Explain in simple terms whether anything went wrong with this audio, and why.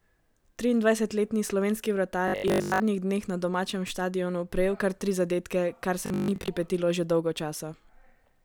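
Robotic sound from repeated short buffers at 2.28–2.82 s and 6.06–6.5 s: the speech turns into a rigid 50 Hz buzz, likely from one 20 ms scrap replaying. Unlike steady mains hum, it comes and goes.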